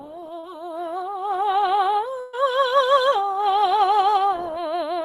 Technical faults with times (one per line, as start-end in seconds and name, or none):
0.39-0.45 short concealed packet loss
2.21-2.35 burst of packet loss